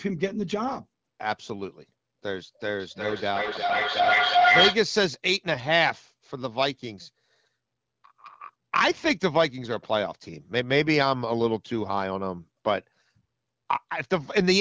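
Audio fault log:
2.8–4.86 s, feedback echo between two devices: the speech returns roughly every 400 ms and builds to about 4 dB above the speech as the original microphone re-captures the other device's playback.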